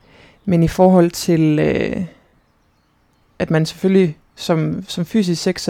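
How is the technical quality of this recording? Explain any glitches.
One fault affects this speech recording. From 2.21 to 2.43 s, lost LE Audio frames break the sound. About 130 ms goes missing in short gaps, the longest around 50 ms. The decoder reuses the last spectrum with random signs, so the sound smears into noise and dips.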